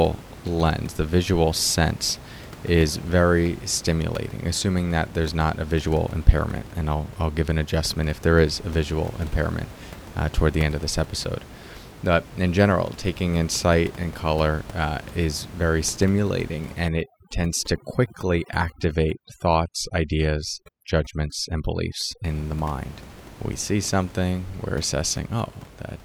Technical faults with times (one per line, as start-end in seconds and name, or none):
16.88-22.24 overdone noise removal